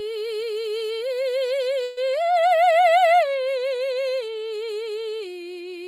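At 1.83 s the music hits a burst of packet loss lasting until about 1.99 s. Roughly 140 ms of audio never arrived. The receiver stretched the last sound over about 133 ms, fading it out. The music then resumes with that stretch missing.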